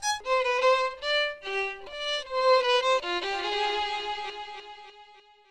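Everyday sound, with nothing technically wrong with it.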